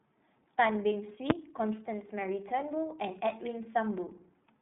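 A speech recording carried through the iLBC codec for its full length. Nothing above 3.8 kHz survives, and the line band runs from about 150 Hz to 3.7 kHz. The voice has a plainly audible rough, synthetic texture from coding each 30 ms frame independently, which fits iLBC's 13.33 kbps mode. At 1.30 s a single loud bang comes from invalid numbers at full scale. A calculation produced infinite or invalid values that were clamped to the maximum sample value for a 5.33 ms block, which fits a 256-sample processing block.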